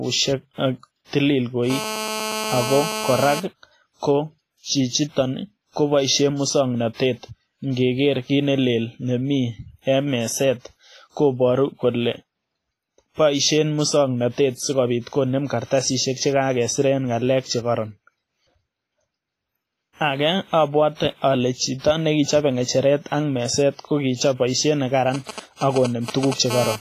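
Across the whole speech clip there is heavy transform-codec damage, likely WMA compression at a low rate, around 24 kbps: ringing, washy quantisation noise smeared over tens of milliseconds, and hiss that swells with the speech. A spectrogram shows a hard ceiling at 15.3 kHz and patchy, dropped-out weak components.

From 1.70 to 3.40 s, GSM phone buzz appears. A nearby 2G phone in a call transmits in bursts 216.7 times a second, and the audio circuit rectifies them into a hard, raspy buzz about 6 dB below the speech. The spectrogram shows evenly stacked harmonic lines of 216.7 Hz, and the waveform shows a regular pulse train.

From 25.14 to 26.34 s, GSM signalling bursts sound as a galloping dit-dit-dit of short 216.7 Hz buzzes, roughly 5 dB below the speech. These come from the phone sending brief groups of radio bursts. On a spectrogram they appear as separate blocks of harmonic lines, and the waveform shows clusters of pulses.

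From 26.50 to 26.76 s, the continuous GSM phone buzz returns at about 6 dB below the speech, with the same raspy 216.7 Hz harmonic comb.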